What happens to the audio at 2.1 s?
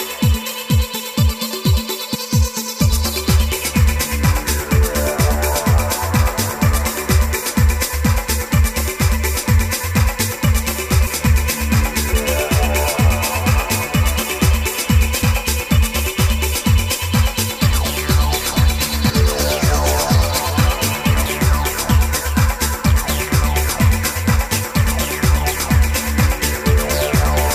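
The decoder skips whole compressed frames between 2.14 and 2.16 s, so about a third of a second of audio never plays, consistent with roughly ten frames of about 23 ms each. At the join the audio jumps ahead by that missing stretch.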